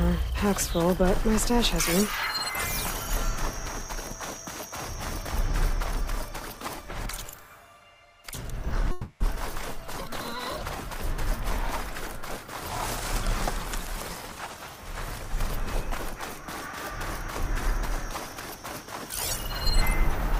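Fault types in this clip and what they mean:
Long network dropout, 8.91 to 9.22 s: the sound smears into a fading buzzy continuation for about 300 ms with no silent gap, likely because packets stopped arriving. Audio then resumes with about 200 ms lost and shifted roughly a tenth of a second later.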